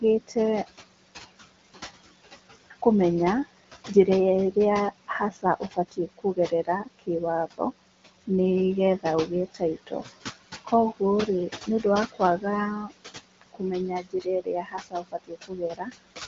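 Noise suppressor artifacts run through the whole clip. The room noise sits about 12 dB under the speech, and the suppressor pulls it down by about 17 dB in the gaps, then lets it back up under the talking. So the background keeps pumping in and out. The band tops out around 7.5 kHz, which fits AMR-WB at one of its higher rates, so there's no codec roughness adding to it.

Speech cut by the noise suppressor shows up four times, where the suppressor mistakes parts of the speech for noise and drags them down with the background. From 5.08 to 7.09 s about half a second in total gets swallowed, dropping by up to about 21 dB. From 8.99 to 10.17 s a brief bit is lost, down about 16 dB. From 11.67 to 12.45 s a very short stretch goes faint, down about 15 dB. The worst one is 13.41 to 15.89 s, where roughly a second and a half is lost at up to about 21 dB down.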